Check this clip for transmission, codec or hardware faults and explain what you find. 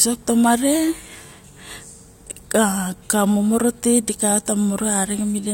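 One hardware fault stands out: word clock ticks, about four of them roughly every 1.5 s between 0.53 and 5.08 s. A receiver running on its own clock drifts against the sender, by about 15 ppm, so each slip drops or repeats one sample. Each tick sounds sharp and uneven. On a spectrogram each appears as a thin broadband vertical line, and on the waveform as a one-sample step.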